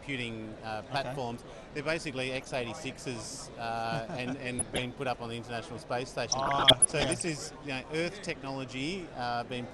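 Throughout, the audio sounds dull and gurgling, with a granular edge on the top end and upper detail that seems to flicker in and out. This is plainly audible MP2 compression, likely from MPEG Layer II coding at a low rate, around 80 kbps by the sound of it. The codec divides the spectrum into 32 sub-bands and shares bits among them. With this little data, upper bands get dropped and the rest are coarsely quantised. Over this bed come three bursts of DAB burbling, short blips of noise in single sub-bands, from 2.35 to 2.98 s, 4.59 to 4.83 s and 6.32 to 7.33 s. Bit errors from weak reception slip past the error correction and corrupt samples and scale factors, so individual sub-bands jump in level frame by frame. The middle burst is the densest, suggesting an error rate near one percent, while the outer two sound somewhat lighter. Their lengths match runs of roughly 27, 10 and 42 damaged frames.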